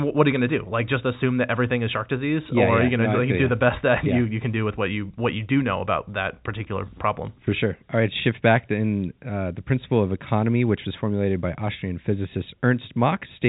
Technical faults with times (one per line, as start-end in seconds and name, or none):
none